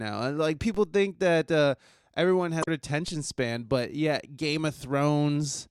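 At 0.75 s, between "and like" and "think that uh everyone", a DC step shifts the waveform's zero line abruptly. It is heard as a low thump or click under unchanged speech, and the offset then decays away at a rate consistent with a 5 Hz high-pass.

From 2.60 to 2.68 s, just after "think that uh everyone", damaged data in the compressed stream makes the decoder misread frames and lose sync for about 80 ms. The result is a short chirp, squawk, click or gap.

At 3.08 s, just before "span but yeah", a second DC step produces the same low thump or click, with the offset again decaying at a rate consistent with the 5 Hz high-pass.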